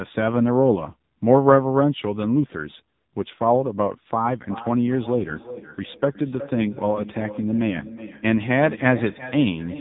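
The whole clip passes through the AMR narrowband mobile codec, coding speech at a low bitrate (the heavy damage fits a rate around 6.7 kbps). Nothing above 3.8 kHz survives, and the voice comes out buzzy, thin and synthetic throughout.

From 4.39 s to the end, a feedback echo between two devices appears: one device replays what the other's microphone captured, and that microphone picks it up again. Each phrase returns roughly every 0.4 s, thinner and ringing, peaking at about 15 dB below the speech.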